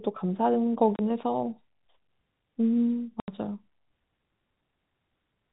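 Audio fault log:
0.96–0.99 s and 3.2–3.28 s, packet loss filled with silence: the speech drops out abruptly for 30 ms and then for 80 ms, each gap opening and closing with a hard edge. Stretches of the stream never arrived, and the receiver played silence in their place. Both gap lengths are multiples of 10 ms, which fits 10 ms packets. The hard switch between signal and silence gives the gaps their sharp edges. The narrowband G.711 A-law telephone sound carries through the rest of the clip.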